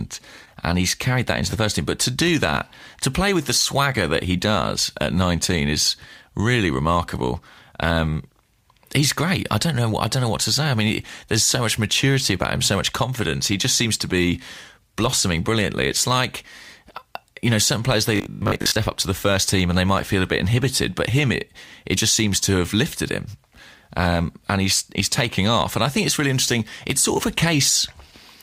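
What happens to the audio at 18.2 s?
Right after "you know certain players", from about 18.16 to 18.78 s, the speech goes robotic from repeated short buffers: a rigid metallic buzz at 50 Hz, likely from a 20 ms chunk looping while most of the real audio is skipped, until "up to the first".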